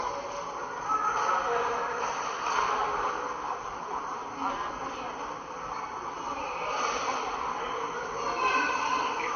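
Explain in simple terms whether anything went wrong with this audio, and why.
Transcoding between lossy codecs, running the whole way through, from 0 to about 9 s. The audio is dull, with nothing above about 6.5 kHz, and it carries two kinds of compression grit layered on top of each other. The likely cause is that it was squeezed into a small MP3 file and then squeezed again into Vorbis. The second squeeze wasted effort preserving the first one's flaws, added its own, and the lost treble never came back.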